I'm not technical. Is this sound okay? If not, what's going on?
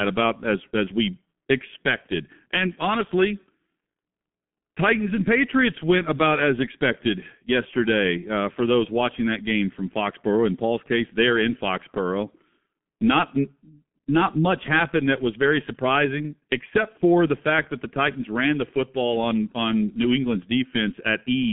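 No. From start to finish the speech sounds muffled, hoarse and boxy, as if heard down an old phone line, with s and t sounds smeared together. It has passed through the G.723.1 codec, an early internet-phone format that discards everything above about 3.5 kHz and heavily simplifies the voice.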